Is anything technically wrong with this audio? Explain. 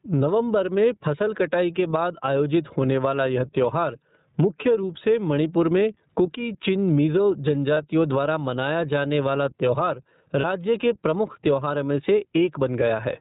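Yes. Gain pumping runs throughout, likely from input gain set too high with a fast limiter clamping each loud syllable; the gain ducks by roughly 15 dB.

iLBC codec, throughout: this narrowband VoIP codec, at a rate fitting 13.33 kbps with 30 ms frames, cuts everything above 4 kHz, leaving the speech rough and synthetic.

Lost iLBC frames at 7.74 s, just before "द्वारा मनाया जाने वाला", and at 10.40 s, between "मनाया जाने वाला त्योहार" and "के प्रमुख त्योहारों में": each 30 ms gap is filled by a repeated pitch cycle with noise, heard as a brief buzzy held vowel that recovers at once.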